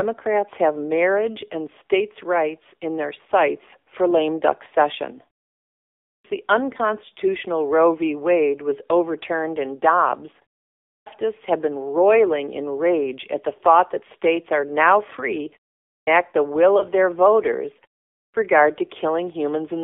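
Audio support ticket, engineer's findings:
AMR narrowband mobile codec, whole clip: speech band runs only about 300 Hz to 3.6 kHz, nothing up top. Plainly buzzy, synthetic edge on the voice, which fits a low 7.4 kbps AMR-NB mode. The vocal-tract model gets too few pulses per frame to rebuild the voice cleanly.

Lost AMR speech frames, 16.78 to 16.83 s, between "the will" and "their voters": quick dip or warble. Sounds like one frame of about 20 ms failing its radio checksum, so the decoder reused the last good pitch and vocal-tract settings at lower gain. Speech comes back weak or rough for a moment straight after.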